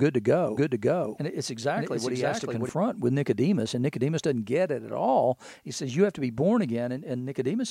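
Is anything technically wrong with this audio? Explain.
Yes. From 0.57 to 2.69 s there is a doubled audio track: a second, full-band copy of the speech runs about half a second behind the original at roughly equal level. It has no decay or room colour and switches in and out abruptly, likely from a slower second capture path.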